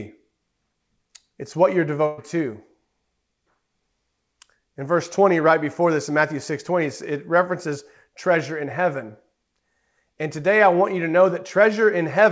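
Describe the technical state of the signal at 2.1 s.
A burst of packet loss runs from 2.06 to 2.19 s, just after "what you're". About 120 ms of audio was lost or late, so the receiver extended the last sound as a fading held tone, then resumed further on without any silent gap.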